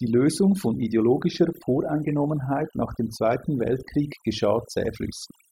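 From start to finish the speech carries overdone noise removal. The suppressor has been pushed hard enough that individual frequency bins near its noise estimate are pulled down to nothing, and the softer parts of the voice are removed along with the noise. Between phrases the floor sinks to an unnatural hush dotted with brief tonal chirps. A simple noise gate would instead mute everything together, without those scattered, pitched specks.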